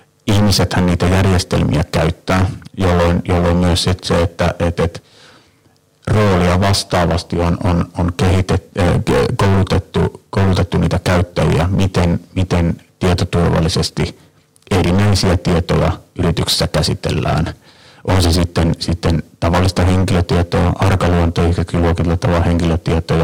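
A harsh, buzzing fuzz sits on every loud syllable for the whole speech clip. This is hard clipping: the signal was driven about 23 dB past what a stage could pass, so nearly a third of samples are cut flat, and those square tops spray high harmonics.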